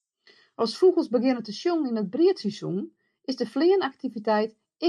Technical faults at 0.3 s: none

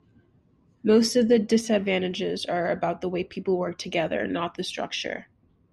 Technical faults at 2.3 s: none

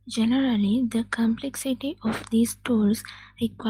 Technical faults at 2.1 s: none

